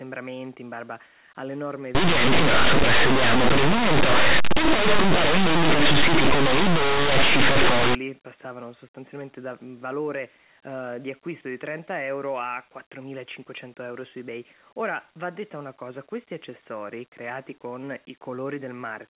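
Linear audio read as companded, 1.95 s to 7.95 s: plain linear 8-bit samples are decoded as mu-law codes. Values just on one side of zero expand to the largest outputs while the other side stays small, so the speech becomes harsh, very loud distortion.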